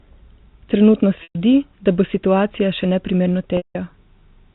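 At 1.23 s roughly 120 ms goes missing, then 180 ms at 3.57 s: packet loss with pitch repetition. The receiver loops the last pitch period to bridge each gap, giving a held, buzzy tone that fades before the speech cross-fades back in.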